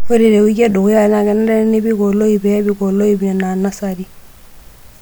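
Listening to the speech recording, nothing stood out as a technical problem at any point.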